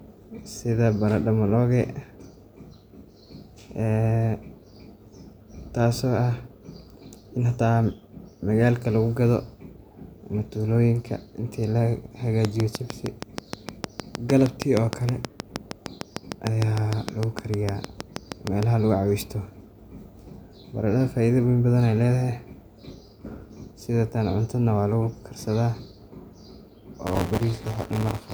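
A speech recording with two technical faults. From 12.45 to 18.64 s, something, likely interference from nearby equipment or a faulty connection or power supply, injects a train of clicks at a regular 6.47 per second: about forty near-identical pops, peaking around 20 dB above the speech and audible in the pauses too. From 27.06 s to the end at 28.33 s, the writing program and the reading hardware slip and cross inside every period, causing buffer tearing. About 15% of each buffer repeats audio from roughly 20 ms earlier, with hard joins on both sides. This produces a robotic 172 Hz buzz, which fits a 256-sample buffer, heard only while speech is present.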